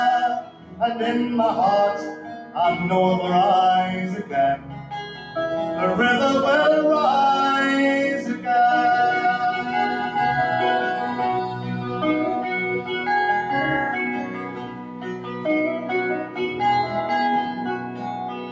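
Right from the start a speech-style noise suppressor is working on material it wasn't built for, treating sustained parts as noise and pulling them down, so the level swings by around 10 dB and the sound pumps and thins. That's audible inside the call microphone processing, which has nothing above 8 kHz. The sound cut by the noise suppressor shows up as distinct dips of about 6 to 9 dB at 0.41–0.81, 2.16–2.56, 4.22–5.36, 11.47–12.03, 12.36–13.08, 13.95–16.61 and 17.48 to the end. Held parts and decays sink while onsets punch through. The longest stretch, around two seconds, is near 14–16.6 s.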